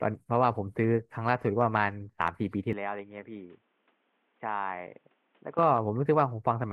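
At 2.73 s the speech suddenly goes dull and boxy, with nothing above 3.8 kHz, a few dB quieter and with fresh low background noise underneath, then clears at 5.59 s. There's no gap at either change. It's likely an input switched to a poorer device.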